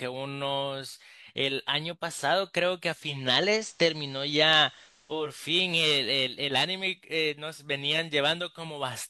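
From 2.97 to 5.44 s, digital radio blending to analogue occurs. The receiver lost its digital stream and cross-faded over about 0.47 s to the FM broadcast, then back. Faint hiss appears, and the level shifts by about 4 dB.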